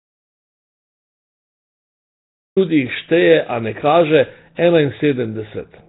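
The clip opens in an audio dropout to silence that is already under way. From 0.0 to 2.57 s there is nothing at all, not even room tone. The input was likely lost upstream, through a disconnected device, a failed link or a mute, while the recorder kept writing empty samples. At 2.57 s the speech begins abruptly, as if it had been running all along.

Once the speech arrives, it carries heavy damage consistent with Nellymoser compression, the old Flash microphone codec, and that is the likely cause. Nothing is present above 3.8 kHz, so the sound is dull and narrow. The codec spends very few bits on each block, and weak bands are replaced with generated noise. The result is a rough, hissy halo around the speech and a smeared, underwater quality. The depth of the damage points to a bitrate near 16 kbps.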